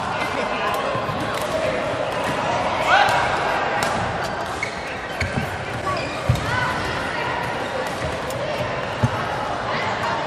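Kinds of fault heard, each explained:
No technical fault can be heard anywhere in the clip.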